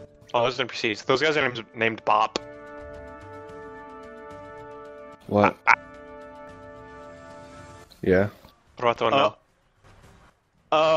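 Dropped samples at 6.48 s and again at 9.25 s: each time a sharp, isolated click cuts through the audio. The likely cause is a tiny gap in the sample stream, a fraction of a millisecond's worth, so the waveform leaps straight from one value to a later one instead of moving smoothly between them. That step is far too brief to remove anything audible, but it shows as a thin vertical line spanning the spectrum.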